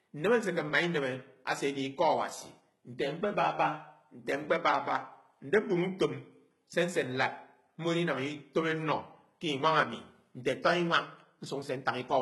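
The speech runs throughout through what is likely HE-AAC compression at a very low rate, consistent with something around 16 kbps. The encoder spends its bits on the lower spectrum and regenerates the treble by copying lower bands upward under a coarse envelope. The damage is heavy: the top end stays bright, reaching up to about 20.7 kHz, but it is synthetic, so sibilants come out gritty, metallic and lispy rather than crisp.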